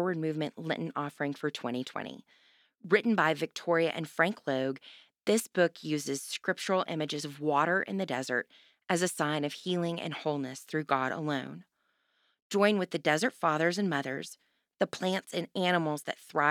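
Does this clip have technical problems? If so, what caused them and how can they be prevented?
No, this speech clip has no technical problems.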